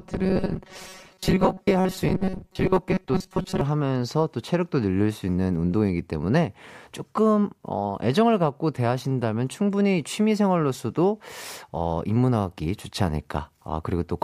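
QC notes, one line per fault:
0.01 to 3.61 s, robotic sound from repeated short buffers: the voice goes stiff and metallic with a fixed buzz at 188 Hz. That's likely audio arriving too slowly, with about half of it replaced by looping a slice of roughly 5.3 ms.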